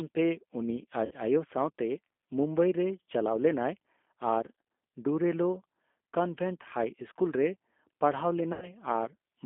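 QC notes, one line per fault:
Throughout: G.729 codec. The audio is band-limited to a line band of about 250 Hz to 3.5 kHz, so there is no low body or upper sibilance. The codec damage is plainly audible as a rough, slightly synthetic texture. The decoder rebuilds each short frame from a vocal-tract filter model, a pitch predictor and a handful of pulses rather than the actual waveform, and this character points to G.729A at 8 kbit/s.
1.05–1.13 s and 8.53–8.70 s: VoIP packet loss concealed by the speech codec. At each point the sound smears into a buzzy tone or coloured noise that fades, followed by weak, distorted sound for a moment after recovery. The decoder fills the gap by repeating its last pitch and filter state at falling gain, and each frame builds on the one before. The gaps correspond to about 60 ms and 90 ms of missing audio, which fits two and three lost packets.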